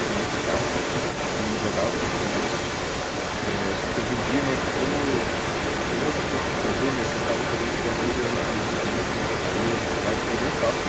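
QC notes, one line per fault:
Throughout: echo leak. A second copy of the speech trails the original by about 223 ms. It sits roughly as loud as the direct speech, so the two overlap and smear each other. The likely cause is a far end playing the call on a loudspeaker, with its echo canceller failing to remove what the microphone picked up. That residue was sent back into the line. The call's microphone processing limits content to 8 kHz.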